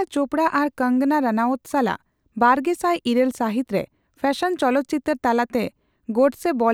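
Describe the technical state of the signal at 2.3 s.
At 2.3 s the speech signal is intact, with no audible technical fault at that moment.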